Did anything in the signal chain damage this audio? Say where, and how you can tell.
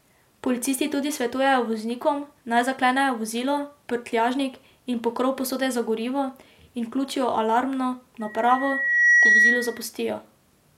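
Yes. Loudspeaker feedback squeal in the acoustic and analogue capture path. Just after "vključijo alarmno", a steady 1.9 kHz tone swells over roughly a second from 8.20 to 9.88 s to about 10 dB above the speech. The microphone is hearing its own loudspeaker, and loop gain exceeds unity at that frequency.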